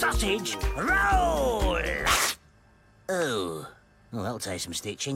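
No technical fault can be heard anywhere in this audio. There is nothing here that calls for a fix or an explanation.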